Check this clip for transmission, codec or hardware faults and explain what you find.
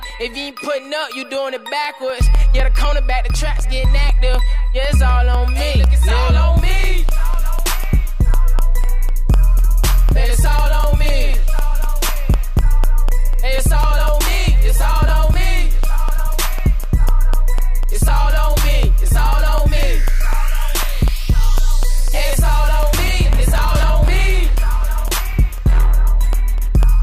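There is one fault: periodic USB or driver dropouts run from 0.1 s to 26.8 s, every 0.25 s. Something stalls the USB bus or audio driver at a fixed interval, and roughly half a millisecond of signal is replaced by silence each time, producing about a hundred evenly spaced ticks wherever sound is present.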